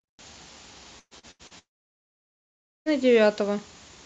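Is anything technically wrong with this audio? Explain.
Yes, there are two network faults.

From 0.99 to 1.54 s there is repeated packet loss, giving a robotic sound. Four gaps, the longest 115 ms, were patched by stretching the previous sound. About half of this span is filled in. The speech turns choppy.

From 1.59 to 2.89 s comes a long dropout, likely a network outage. The receiver briefly extends the last sound, which fades out. About 1.2 s of silence follows. The speech then resumes with that stretch missing.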